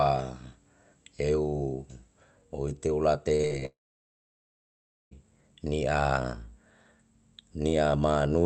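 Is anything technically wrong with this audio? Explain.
Yes. From 3.35 to 3.63 s there is repeated packet loss (robotic sound). Four short gaps, up to 40 ms, are patched by extending earlier sound, giving a choppy texture. From 3.65 to 5.13 s, a long network dropout likely occurred. A brief fading buzz or hiss gives way to about 1.4 s of silence, and the lost audio never returns.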